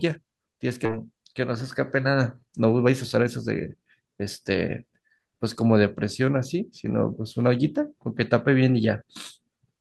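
At 0.85 to 0.96 s the speech makes a skip ahead: roughly a second of audio is gone, and the two sides are spliced almost directly. Unlike a dropout there is no silence or concealment fill, just an abrupt jump forward.

Jitter buffer speed-up follows at 1.40 to 2.05 s (106%), 2.46 to 3.27 s (121%, trimming around a fifth of a second), 3.78 to 6.55 s (106%) and 7.01 to 7.75 s (108%). Pitch-period trimming hurries delivery while pitch stays unchanged, which rules out a resampling error.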